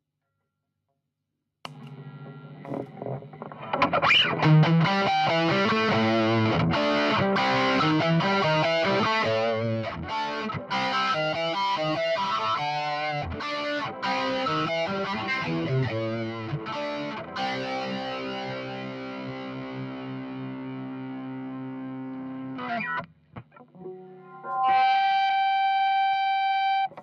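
A noise suppressor applied to music or sounds runs through the whole clip. A filter built for speech treats sustained tones and ambience as noise and pulls them down, so the level swings by roughly 15 dB and the sound pumps and thins as held material sinks behind the attacks. Sound cut by the noise suppressor is heard at 9.85–10.12 s, 10.29–10.72 s, 13.27–13.45 s, 13.85–14.04 s, 16.2–22.7 s and 23.01–24.45 s. In these passages steady or decaying content drops by about 6 to 8 dB and tails are clipped short, including across the long stretch of around seven seconds from 16.2 s.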